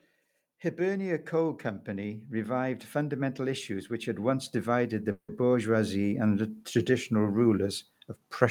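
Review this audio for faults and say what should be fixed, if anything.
Automatic gain rising runs from 0.76 s to 7.74 s. The level climbs steadily by about 14 dB as the gain control decides the input is too quiet, so the speech and the background noise swell together rather than the speech alone getting louder. On a waveform the envelope widens like a slow ramp across those seven seconds, and on a spectrogram the noise floor between phrases brightens along with the speech. Setting a proper input level at the source, or fixing the gain so it doesn't adapt mid-call, would prevent this.

A call audio freeze occurs from 5.11 s to 5.42 s. The last sound is stretched into a buzz or hiss for roughly 170 ms that fades out, followed by about 70 ms of silence, and then the speech resumes exactly where it stopped. Nothing is lost, but the rest of the clip now runs about 170 ms late. This points to late packets draining the jitter buffer, likely caused by network delay. 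On a spectrogram the stretched sound shows as flat, smeared horizontal bands ending in a blank strip, and the waveform shows a decaying repetitive stretch before a short flat line. A steadier network path or a deeper jitter buffer would prevent this.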